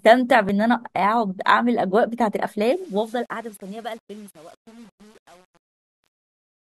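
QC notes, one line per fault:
0.49 s, overlap between stream segments: a sliver of audio, some 16 ms, is cut where two segment timestamps overlap, so the waveform jumps and a single tiny skip results. Unlike a dropout, nothing goes silent; unlike a codec glitch, there is no smeared tone.
2.66–6.65 s, truncation distortion on a fade: the fade-out is held at about 8-bit resolution without dither, so the falling level collapses into coarse square steps. It turns gritty, worst from 2.98 s. Steady hiss would instead be noise.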